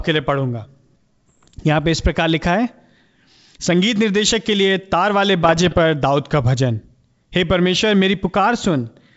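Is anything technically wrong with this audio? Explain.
Yes. Bit errors on an ADPCM link, at 1.28 to 1.55 s and 5.44 to 5.79 s, upset the decoder's step size and predictor. The result is pops and rough bursts, visible as waveform spikes and level jumps and as broadband vertical streaks on a spectrogram.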